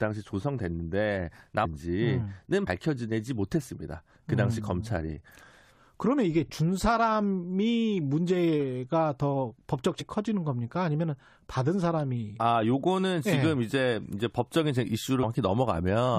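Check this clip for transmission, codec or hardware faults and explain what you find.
There are three short bursts of damaged data in the compressed stream. They fall at 1.64 to 1.66 s, at 2.66 s, and at 10.00 to 10.02 s. Each lasts about 20 ms or less. At these points some bytes of the coded speech were wrong. The decoder misread those frames and lost sync. It then hunted for the next valid frame header. Each event is heard as a brief chirp or blip.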